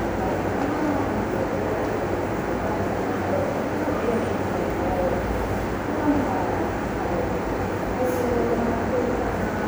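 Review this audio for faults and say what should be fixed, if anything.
Nothing to fix: no faults were found in this recording of sounds, so no corrective action is needed.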